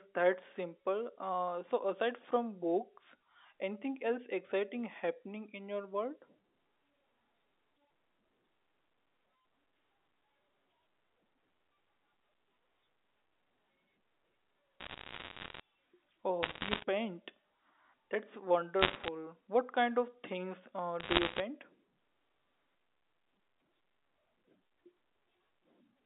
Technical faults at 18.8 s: bit errors on a digital phone line

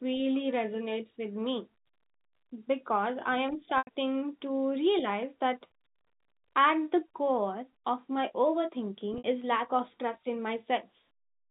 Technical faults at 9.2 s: packet loss with pitch repetition

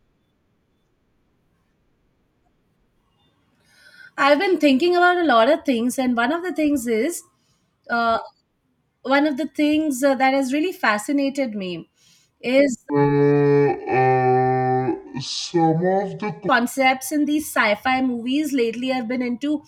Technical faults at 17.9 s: none

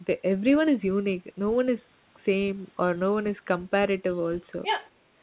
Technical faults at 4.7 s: other side's voice leaking through

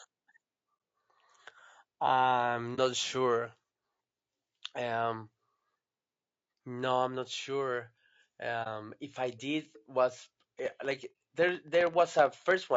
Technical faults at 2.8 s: low-delay AAC compression; AAC frame loss with muting

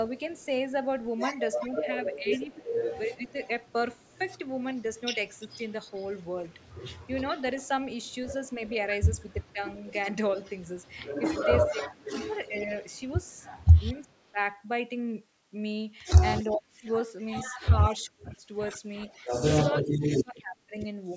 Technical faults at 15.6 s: none

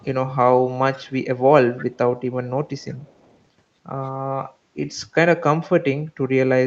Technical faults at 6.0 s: speech suppressed in double talk

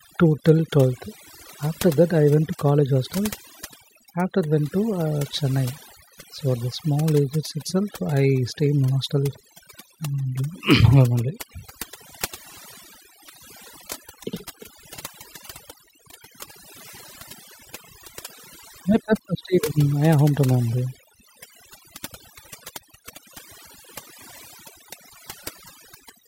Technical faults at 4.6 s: overdone noise removal

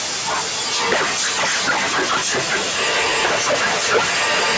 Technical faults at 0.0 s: stuck bit

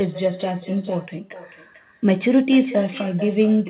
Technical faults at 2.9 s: echo with no canceller

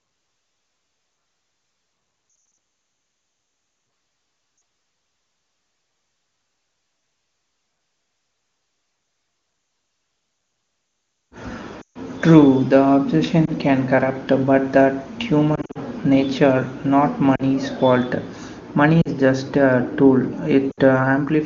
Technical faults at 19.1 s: lost AMR speech frames

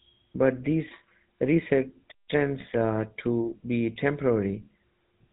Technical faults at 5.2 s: GSM full-rate codec

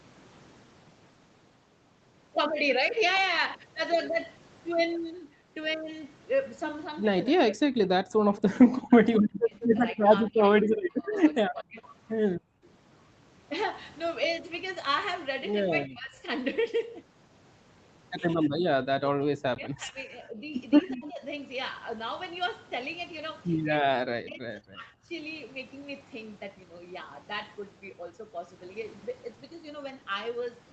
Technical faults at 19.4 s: speech suppressed in double talk

